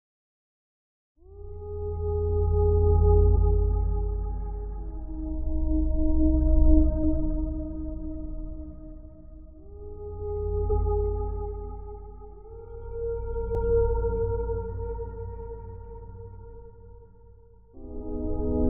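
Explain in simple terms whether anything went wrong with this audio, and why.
Short chirps or blips cut into the sound at 3.36 to 3.38 s, and again at 7.02, 10.69, 13.55 and 17.73 s. This is damaged data in a compressed stream: parts of the file were corrupted, so the player briefly misread them and produced these glitches.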